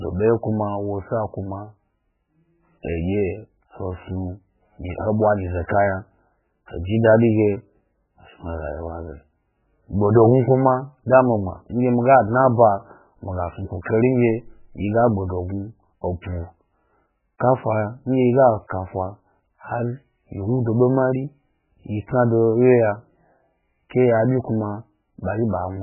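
Speech runs throughout with heavy, watery, swirling damage and nothing above 3 kHz, likely from MP3 compression at a very low bitrate, around 8 kbps. On a spectrogram the energy stops at a flat ceiling near 3 kHz, with patchy blocks flickering on and off below it. Pre-echo appears at 2.83 s and 23.90 s: a short hiss of about 15 ms and 13 ms precedes each sharp attack, because the codec spread quantisation noise across the whole block. The waveform shows a low smear just ahead of each onset.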